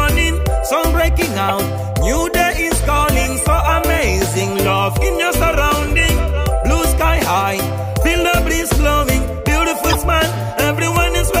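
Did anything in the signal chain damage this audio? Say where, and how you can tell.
Yes. There are two brief glitches that don't belong to the sound, one from 1.48 to 1.51 s and a longer one from 9.88 to 9.96 s. This is a corrupt frame decoded at the codec stage. Flipped bits in a couple of compressed frames each time were decoded anyway, so misread gains and codes threw energy into the wrong frequencies for roughly the span of those damaged frames.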